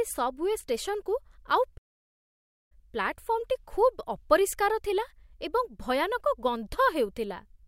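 A playback stall in this speech recording silences the output from 1.77 s to 2.72 s, about 0.93 s, before "ପ୍ଲାଟଫର୍ମଟି ଖୁବ୍" resumes, likely because the player ran out of buffered data.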